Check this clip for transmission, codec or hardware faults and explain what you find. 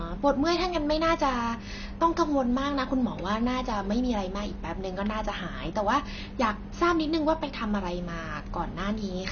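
One fault runs through the whole speech clip: AAC compression, heard from start to finish. Nothing is left above about 6.5 kHz, so the top of the spectrum is simply gone. The damage is plainly audible. The codec is likely AAC-LC at a low bitrate, which fits roughly 24 kbps. At that rate the encoder lowers its cut-off and quantises the remaining bands coarsely. The speech sounds dull and smeared, with a warbling, fizzy edge on sibilants.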